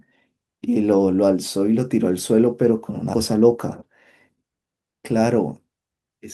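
At 3.13 to 3.15 s the speech shows a skip ahead. Roughly a second of audio never reaches the listener, either lost in transit or discarded by the jitter buffer as it overflowed while later audio was already queued. Nothing fills the hole, so the two sides of the jump join almost directly with no silence. The result is an abrupt splice in the speech, and the end-to-end delay falls by around a second.

From 4.29 to 5.27 s a jitter buffer speed-up follows. The buffer was holding more audio than its target, so the receiver trimmed it down by cutting short segments of one or a few pitch periods, over and over, removing something like 150 ms in total. Playback runs at 112% speed with the pitch unchanged, and the speech in this stretch sounds noticeably hurried.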